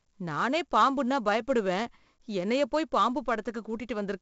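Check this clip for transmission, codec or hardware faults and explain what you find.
The speech carries 4-bit ADPCM compression for its whole length, with heavy codec damage. Each sample is coded as a coarse 4-bit step from a predicted value, and the step size adapts, so the error is noise that rises and falls with the speech. That gives a gritty hiss riding on every loud syllable and roughness on sharp onsets where the step lags. Nothing reaches above 7.7 kHz, which fits a data rate of about 64 kbps, and the sound is dulled. Because the hiss tracks loudness rather than sitting at a steady floor, and there is no swirling or warbling, it points to ADPCM rather than plain bit reduction or a transform codec.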